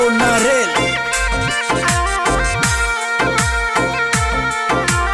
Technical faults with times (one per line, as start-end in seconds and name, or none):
none